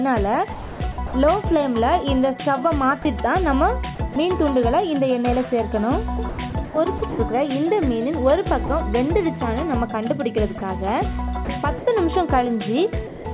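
From 0.53 to 1.13 s the sound is chopped by the voice detector, most likely switching repeatedly between sending and not sending. About 390 ms is replaced by comfort noise, so the sound stutters. A spectrogram shows rapid alternation between detailed content and flat, featureless noise. The same chopping recurs at 3.95 to 4.16 s (60 ms replaced), 6.29 to 7.19 s (330 ms), and 11.45 to 11.87 s (120 ms).

At 2.08 s there is a single loud pop, likely an electrical pulse, peaking about 5 dB above the signal. It appears as a sharp spike on the waveform and a thin vertical line across the spectrogram, with the sound continuing underneath.

Sound is also dropped by the voice detector, most likely because it mistook quieter passages for background. Brief gaps of about 30 ms occur at 3.02, 8.66 and 10.58 s, and a longer 180 ms gap runs from 13.07 to 13.25 s. In each case the sound gives way to steady comfort noise. 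On a spectrogram these show as smooth, uniform patches. The call path's 4 kHz ceiling is visible as a hard cutoff, which fits 64 kbps G.711.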